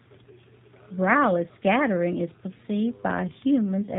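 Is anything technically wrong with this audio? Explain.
Yes. G.729 codec coding is present throughout the speech, and its damage is plainly audible. The codec models each 10 ms frame with a vocal tract filter, a pitch predictor and a handful of pulses per half-frame, a sparse description that fits the 8 kbit/s G.729A variant. Everything above 4 kHz is gone, so the speech sounds narrowband and muffled, with a rough, slightly synthetic buzz in the voiced sounds.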